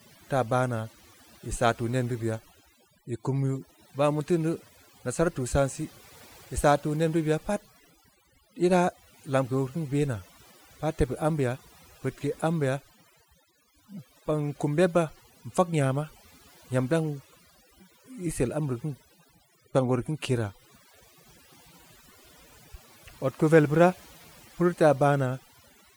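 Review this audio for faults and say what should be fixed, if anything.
From start to finish, the gaps between phrases sink to near silence dotted with twinkling specks. This is overdone noise removal: the reduction was pushed so hard that bands near its noise estimate were cut away, taking quieter parts of the voice with them. To prevent it, use a gentler reduction amount and compare the result with the untreated recording before committing.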